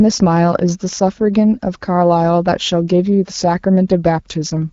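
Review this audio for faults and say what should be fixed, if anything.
CD scratch ticks, 0.93 to 1.48 s: five clicks up to about 2 ms, one per disc turn where a scratch beat error correction; thin vertical spectrogram spikes. Clean or resurface the disc and re-rip it with a secure, re-reading ripper.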